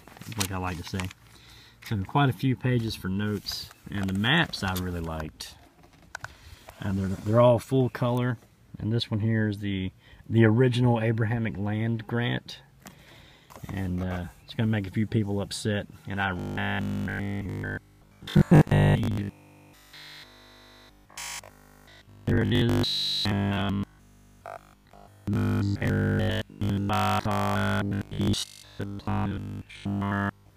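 From 16.40 s to 30.56 s, new audio likely stops arriving often enough, so the playback software keeps filling the gaps by looping the last short buffer while the real signal is skipped. That is robotic sound from repeated short buffers, with repetition filling roughly seven tenths of this stretch. The loop imposes a rigid 50 Hz buzz, which fits a 20 ms buffer, turning the sound metallic while it still loosely tracks its original shape to the end.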